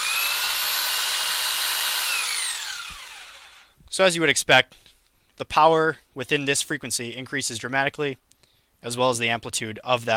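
No technical faults are audible.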